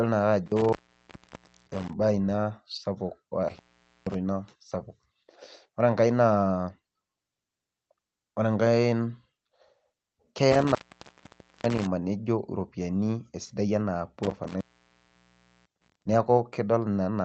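Intermittent contact cuts this speech clip four times: 0.46 to 1.93 s, ending just before "ina sapuk"; 3.49 to 4.15 s, between two instances of "ina sapuk"; 10.52 to 11.87 s; and 14.23 to 16.03 s, right after "esidai enaa". Each time a loose plug or cable briefly opens, with crackle at the edges and faint hiss in the gaps, which last about 0.94, 0.47, 0.89 and 1.05 s. The audio is limited to about 8 kHz, which fits the Opus call path it travelled through.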